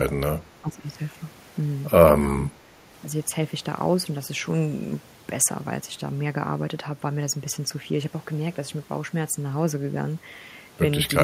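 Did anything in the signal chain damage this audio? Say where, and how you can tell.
Yes. In call processing, the speech is turned down at 0.05–0.22 s (by about 20 dB), 0.38–0.84 s (about 10 dB) and 2.38–2.79 s (about 5 dB), likely speech suppressed in double talk by an echo canceller ducking both sides.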